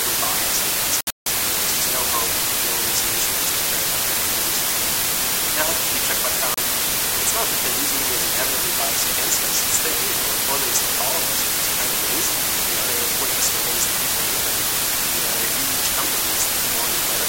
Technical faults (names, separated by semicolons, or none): low bit depth with dither; digital broadcast dropout